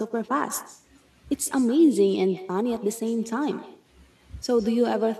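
From start to end, the speech carries echo with no canceller. The far end's loudspeaker feeds its microphone, and nothing removes the return. Each phrase comes back around 150 ms later. The copy sits about 16 dB down and sounds thin.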